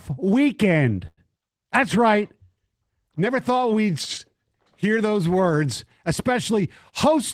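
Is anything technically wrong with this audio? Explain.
Yes. From 1.07 to 1.20 s there is a short stall from a late packet. A packet missed its playout deadline, the jitter buffer emptied, and the receiver filled the gap by stretching the last sound for about 100 ms. When the packet arrived, playback resumed at the same point, so no audio is lost. Everything after the stall plays 100 ms later than before. The held sound is drawn out unnaturally, with a faint buzz or slight dip.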